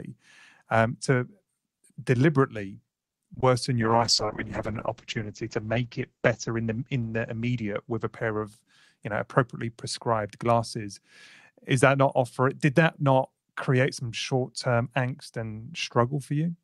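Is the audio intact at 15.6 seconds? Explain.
Yes, the speech at 15.6 seconds is intact, with no audible fault at that moment.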